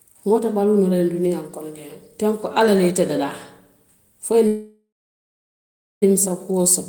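A call audio freeze hits this speech from 4.47 to 6.04 s, after "fo i ye": the sound stretches into a fading buzz, then about 1.1 s of silence. Delayed packets likely emptied the jitter buffer, and the speech resumes where it stopped, roughly 1.5 s late, with nothing lost.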